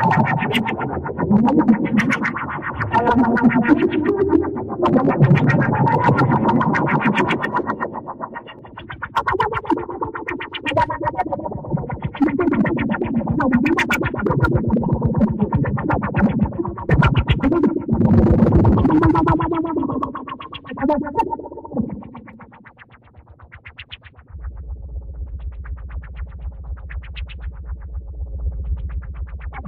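No technical faults can be heard anywhere in the audio. Nothing in the sound points to a problem in the recording or playback chain.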